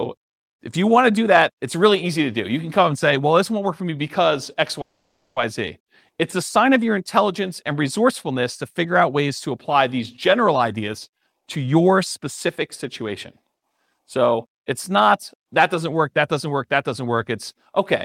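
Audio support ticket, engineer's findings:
Call audio freeze, 4.81–5.39 s. The sound stalls and is held as a fading tail, then about 430 ms of silence, 550 ms filled in total. Likely late packets draining the jitter buffer. Playback resumes where it stopped, nothing lost, delay now 550 ms longer.

Jitter buffer speed-up, 10.77–12.19 s and 13.42–15.34 s. Speech hurried at unchanged pitch: 125% speed in the first (about 0.4 s cut), 108% in the second (around 0.15 s). The buffer, overfilled after a packet burst, drops short pitch-period pieces to cut latency.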